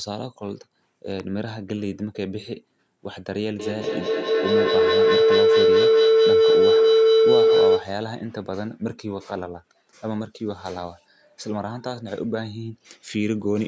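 At 1.10 s a short burst of processor overload crackle runs until 1.24 s. The processor missed a handful of buffer deadlines in a row, and each miss was filled with silence, so the speech is punched with tiny hard-edged gaps that sound gritty rather than like a single click. The gaps are so brief that they fit buffers well under a millisecond long. Unlike a dropout, nothing goes quiet for long. The tearing simply stops once the load passes.

From 3.59 s to 7.99 s a feedback howl builds. A second device in the same room was on the call, so sound looped from loudspeaker to microphone and gained level on each trip. The repeats narrow to a tone near 500 Hz that peaks about 10 dB above the speech, with a loop delay of roughly a fifth of a second. An echo would decay, but this tone swells until the loop is broken. Above it, the call's microphone path passes nothing over 8 kHz.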